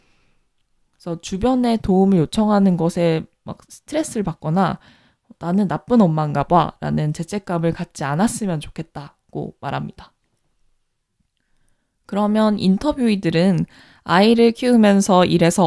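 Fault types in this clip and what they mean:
No faults can be heard anywhere in this recording. Nothing in the speech points to a problem at any stage of its path.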